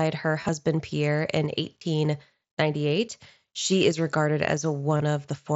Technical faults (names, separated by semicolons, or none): concealed Bluetooth headset packet loss